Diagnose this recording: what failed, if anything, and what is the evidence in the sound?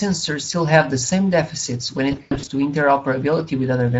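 The speech sounds noisy and hoarse for the whole clip, with a grainy, hissy quality in the upper band instead of clean high-frequency detail. This is Speex codec damage at the codec stage. The CELP coder has too few bits to model the excitation accurately, so fine voice texture becomes noise, and the top band is a shaped noise fill. The degradation fits a middle Speex setting around 16.8 kbps.

From about 2.11 s to 2.49 s the speech breaks into stretched, buzzy fragments that fade and then recover unevenly, with the voice staying weak and distorted between the gaps. This is VoIP packet loss concealed by the speech codec, at the network stage. About 220 ms of audio went missing, scattered over roughly 360 ms, with the longest gap near 100 ms. That points to around eleven lost 20 ms frames. The decoder filled each gap by extending its last pitch and filter with decaying gain, and because each frame builds on the state of the one before, the distortion persisted after packets resumed.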